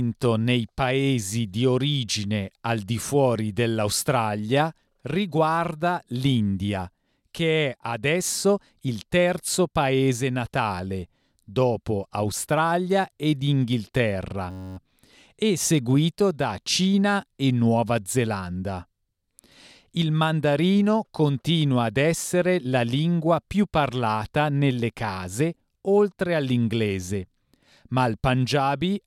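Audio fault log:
14.51–14.77 s, system hang loop: A 10.67 ms slice of sound repeats 25 times, which fits a 512-sample buffer. The loop rate of 93.8 Hz gives a steady buzz. Speech resumes with "e seguito da", with almost nothing missing.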